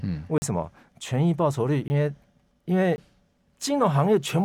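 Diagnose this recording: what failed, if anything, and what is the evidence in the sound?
The speech drops out three times, each a block of digital silence. The gaps fall at 0.38 to 0.42 s, 1.88 to 1.90 s and 2.96 to 2.98 s. The first lasts 40 ms and the others 20 ms. Each one cuts to silence and back with no fade. The blocks have fixed lengths and hard edges. That points to the driver or buffer stage, where output samples were not delivered in time and zeros filled the space.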